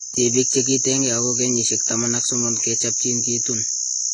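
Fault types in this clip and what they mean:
AAC compression: the speech sounds dull and smeared, with nothing above 11.3 kHz, likely from a low-bitrate AAC-LC encode that fits roughly 32 kbps.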